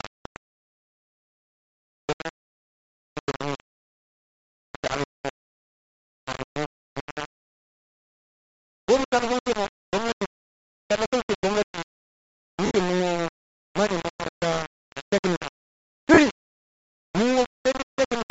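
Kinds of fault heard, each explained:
Low bit depth without dither: The speech is coarse and gritty throughout, with grainy distortion that follows the voice and a noise floor only roughly 10 dB below it. The likely cause is rounding to very few levels without dither, which fits about 4 bits.
Bluetooth LC3 compression: A breathy, grainy edge sits on the speech, with the upper spectrum thinned and partly replaced by noise. This plainly audible damage is likely from the LC3 codec at a low bitrate, which fits around 32 kbps with 10 ms frames.
Lost LE Audio frames: At 12.66 to 12.71 s (50 ms) and 16.14 to 16.18 s (40 ms) the speech briefly turns into a noisy smear. The decoder repeated the last spectrum with scrambled signs, which fits five and four missing 10 ms frames.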